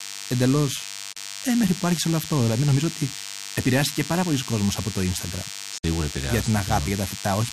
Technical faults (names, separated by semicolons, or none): DECT cordless phone buzz; digital broadcast dropout